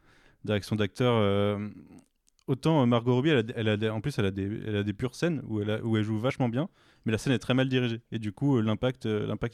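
Right after "elle où elle joue", at about 6.30 s, there's a compressed frame skipped. One frame, roughly 20 ms worth, fitting a 23.2 ms frame length, never got played, so the speech jumps ahead into "bien mais la scène".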